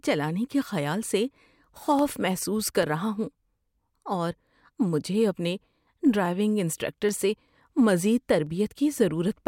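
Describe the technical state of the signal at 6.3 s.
At 6.26 s, just before "انسٹرکٹر سے مزید", the speech carries a single sharp click, most likely from dropped samples: a fraction of a millisecond of the stream is missing, so the waveform jumps straight from one value to a later one instead of moving smoothly between them. Too little is lost to remove any audible sound. On a waveform it shows as an abrupt step; on a spectrogram, as a thin vertical line spanning the frequency range.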